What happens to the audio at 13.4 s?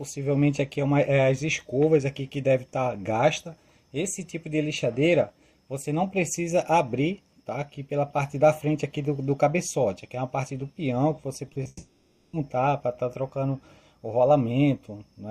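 Nothing goes wrong at 13.4 s; the audio runs through that moment intact, with no dropout, click or distortion.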